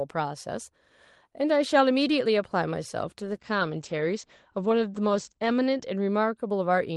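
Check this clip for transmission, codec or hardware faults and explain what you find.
One fault stands out: a call bitrate drop in the second half of this speech clip, carried over an Opus call path.

From 3.2 s to 6.43 s the call's bandwidth estimate fell, so the encoder had far fewer bits to work with. The audio turns coarse and watery, and its top end narrows from about 12 kHz to 8 kHz. That points to a fall from roughly 32 kbps to around 12 kbps, held at its lowest for about 2.33 s. Unlike packet loss, there are no gaps, repeats or robotic stretches. The signal stays continuous and simply degrades until it recovers.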